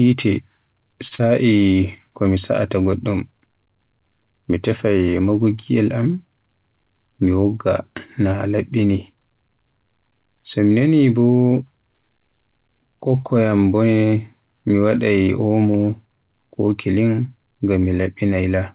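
Right at 1.08 s there's a short stall from a late packet. A packet didn't show up when it was due, the jitter buffer ran dry, and the receiver held the last bit of speech for about 30 ms until the data caught up, then carried on from the same spot. Nothing's actually lost, but you hear a sound hang on a touch too long, with a faint buzz. The delay shifts by about 30 ms, and the whole episode runs to about 1.29 s.

Overlapping that, from 1.15 s to 1.22 s, there's a short concealed packet loss. About 40 ms of audio never reached the decoder in time, so the receiver patched roughly 35 ms of it by extending what came before, then blended back into the real signal. That gives a quick smear or wobble in the speech, layered on the stall. The call path's narrow band, with nothing above 4 kHz, fits G.711 A-law.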